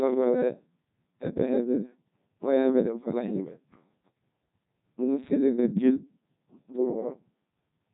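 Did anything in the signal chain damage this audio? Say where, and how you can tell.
Yes: the codec stage used a Codec 2 vocoder at a rate that sounds like about 1.2 kbit/s. Throughout, the speech is robotic and buzzy with nothing above 3.8 kHz, because only pitch, voicing, energy and a spectral envelope were sent and the decoder rebuilt the voice from sine waves.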